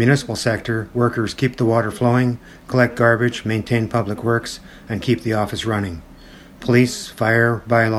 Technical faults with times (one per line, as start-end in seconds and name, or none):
none